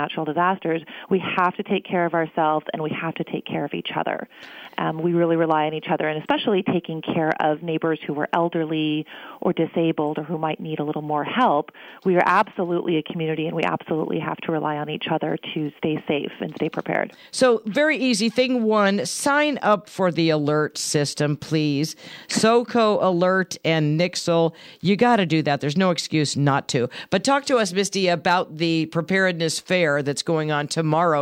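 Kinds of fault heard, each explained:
No fault of any kind can be heard in the clip. There is nothing to list for it.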